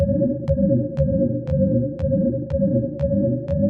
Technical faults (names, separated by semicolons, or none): none